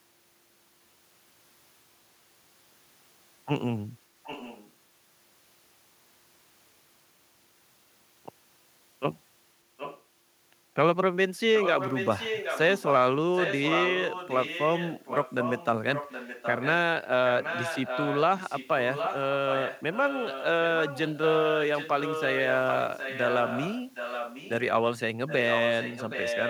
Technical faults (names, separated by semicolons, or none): echo leak